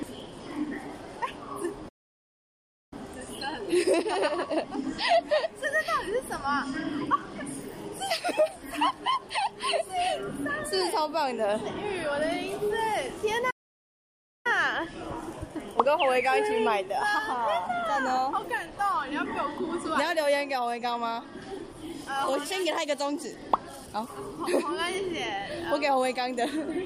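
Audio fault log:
Throughout: clock drift between sender and receiver. The sending end's clock runs roughly one and a half percent slow against the playback side, so the buffer keeps draining and has to be topped up. You hear it as a faintly uneven, slightly dragging pace.
0.16–26.86 s: repeated timing corrections. The receiver keeps stretching the sound by repeating tiny slivers, nudging playback to about 99% speed so it doesn't run dry. The edits all go the same way but land irregularly, giving small hiccups and a wobbly tempo.
1.88–2.93 s and 13.50–14.47 s: playback stall. The sound cuts out mid-flow for about 1.03 s and then 0.94 s before carrying on. Most likely the slow sender let the buffer run completely empty despite the corrections, so the output simply went silent.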